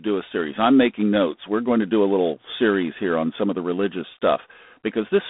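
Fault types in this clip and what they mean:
G.726 ADPCM: a waveform coder that sends only the difference from an adaptive prediction, here at a coarse step size that fits 24 kbit/s, so quantisation error rides on the speech as a harsh, rasping hiss that swells and fades with its level. The speech is band-limited to roughly 200 Hz to 3.6 kHz with nothing above 3.8 kHz. On a spectrogram, a hard ceiling and grainy noise fill the gaps between harmonics; the waveform looks fuzzy on loud stretches.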